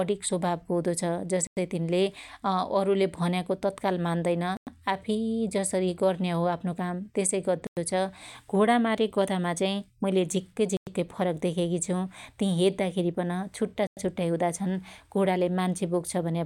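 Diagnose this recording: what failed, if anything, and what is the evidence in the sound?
Chunked delivery or playback failed: there is a gap between chunks. The speech stops dead for 100 ms at 1.47, 4.57, 7.67, 10.77 and 13.87 s, repeating every 3.1 s, which fits 3.0 s chunks, each followed by inserted silence. No audio is missing; it is pushed later at each join. On a waveform each gap is a flat line with abrupt edges, and on a spectrogram a clean vertical blank stripe across all frequencies.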